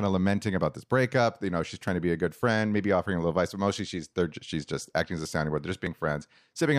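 From 1.88 s to 5.87 s, periodic USB or driver dropouts recur every 1.99 s, roughly three times. Each time something stalls the USB bus or audio driver, around 10 ms of speech is skipped outright, leaving a small regular tick or pop in the signal.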